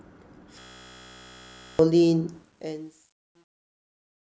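From 0.59 to 1.79 s a system hang loop occurs: the machine stalled while the audio hardware kept replaying the same 16 ms stretch of its ring buffer, which fits a 256-sample buffer. That repeats at 62.5 Hz, a steady buzz, and about a second of speech never arrives.

From 2.32 s to the end, the fade-out shows truncation distortion: the gain stage kept only 10 bits without dither, so low levels collapse into coarse steps. From 2.82 to 4.32 s the fading tail turns gritty.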